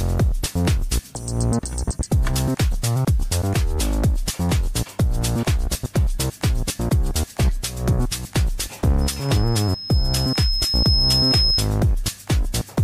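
Loudspeaker feedback squeal, 9.01 to 11.71 s: the microphone re-amplifies its loudspeaker, so a 5.2 kHz tone swells over about two seconds, drawing a bright horizontal spectrogram line.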